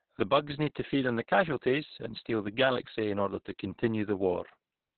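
Throughout the clip the speech sounds muffled, hoarse and somewhat robotic, with nothing above 4.2 kHz. This is heavy Opus voice compression: the SILK coder has cut the band to narrowband and coded the excitation very coarsely, which fits a bitrate around 6 kbps.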